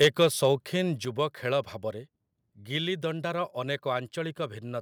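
From 0.01 to 0.46 s the loudest peaks carry a harsh, crackling edge with flattened tops. This is microphone overload: the input was driven about 7 dB past the converter's limit, so a small fraction of samples were likely clipped off.

At 0.05 s the level drops by about 2 dB, and at 1.05 s by a further 5 dB or so, with voice and background falling together. This sounds like the microphone volume stepped down, most likely the call software cutting input gain in response to the clipping.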